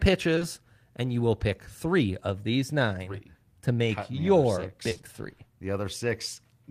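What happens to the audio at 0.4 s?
Two back-to-back short concealed packet losses occur here, from 0.35 to 0.39 s and from 0.39 to 0.43 s, just before "and you will pick". In each, about 20 ms of audio arrived too late for the decoder, and the receiver covered the gap by extending the preceding sound, following its pitch if voiced or as shaped noise if not, before crossfading into real audio. The result is a brief smeared, wobbly patch lasting roughly 80 ms.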